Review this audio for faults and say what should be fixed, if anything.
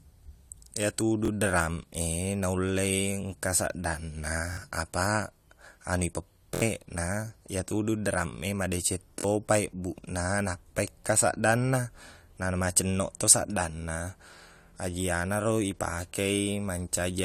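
Audio reached the output late four times, so the device replayed its last block: a repeated buffer. A 23 ms piece, which fits a 1024-sample buffer, stutters with hard joins. It plays twice at 1.25 s, three times at 4.53 s, four times at 6.55 s after "apaq anu", and three times at 9.20 s. A larger output buffer or a higher-priority audio thread would keep new data arriving in time.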